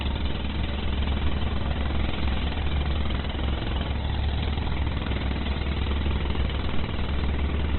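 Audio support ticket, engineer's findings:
Throughout: grainy, rough texture on all sound, tonal parts smeared into noise, dull top end with nothing above 4.2 kHz. Likely Opus compression, music (CELT) mode, narrowband, heavy damage; bands starved of bits get filled by folding or noise, which fits a bitrate near 12 kbps.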